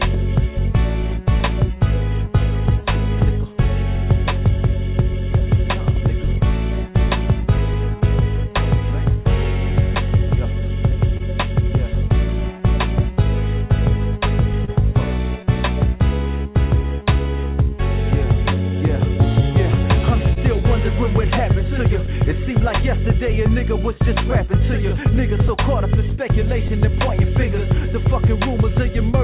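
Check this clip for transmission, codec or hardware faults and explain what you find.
Several network-timing faults are present, all concealed rather than dropped, heard through a narrowband call path whose spectrogram shows nothing above 4 kHz, which fits G.711 mu-law at 64 kbps.

Clock drift between sender and receiver runs through the whole clip. The sender's clock runs roughly two percent slow, so the jitter buffer keeps draining. The receiver repeatedly stretches audio to compensate, giving recurring small hiccups at irregular intervals rather than one obvious event.

Repeated timing corrections span 0.07 to 28.99 s. Playback runs at 99% speed, and around a third of a second is inserted overall, all in the same lengthening direction. Heard as a faintly unsteady, dragging tempo. On a waveform, short stretched segments appear unevenly spaced, with no silent gaps.

Scattered short gaps occur in three clusters. 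From 4.27 to 11.22 s there are about seven. From 20.33 to 22.62 s there are about three, the longest a few tens of milliseconds. From 25.48 to 26.71 s there are about three very brief ones. Each lost or late packet was patched by continuing the previous sound, heard as ticks or brief smears. A spectrogram shows tiny flattened, repeated slices.

A short stall from a late packet occurs at 14.65 to 14.70 s. The buffer ran empty and the last sound was held for 30 ms until the packet arrived, with nothing lost. It is heard as a slightly prolonged sound with a slight buzz or dip. The spectrogram shows a brief frozen, smeared band.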